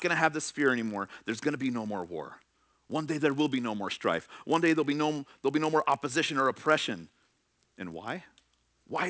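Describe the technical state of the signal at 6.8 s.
At 6.8 s, as throughout the clip, the resampler is restarted on every block: each 20 ms chunk is converted in isolation, which fits a 44.1 kHz to 16 kHz conversion, leaving a small error at every block edge. These edge errors recur at 50 Hz, heard as a buzz riding under the speech.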